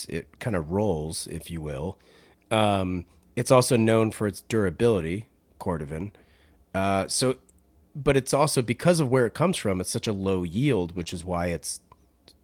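Lost packets rebuilt from error correction occur five times in this speech clip, at 4.99, 5.93, 8.65, 10.13 and 11.06 s. Each covers a single 20 ms packet. In each case the packet never arrived, but the next one carried a low-bitrate backup copy, and the decoder played that instead. There is no gap, but each patch sounds briefly rougher and grainier than the surrounding speech. A short concealed packet loss runs from 11.03 to 11.08 s, where about 20 ms of audio failed to reach the decoder in time. The receiver bridged it with 24 ms of synthesized continuation, extending the preceding sound before crossfading back into the real signal. This gives a brief smear or wobble, and it overlaps the last rebuilt packet at 11.06 s.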